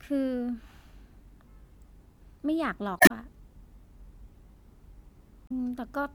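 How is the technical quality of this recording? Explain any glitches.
The speech is marred by two glitches, both from damaged data in a compressed stream. Corrupted bytes made the decoder misread frames and lose sync while it hunted for the next valid header, producing brief glitches from 2.97 to 3.11 s and again from 5.47 to 5.51 s.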